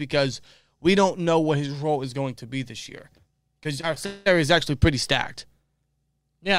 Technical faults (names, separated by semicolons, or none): repeated packet loss (robotic sound)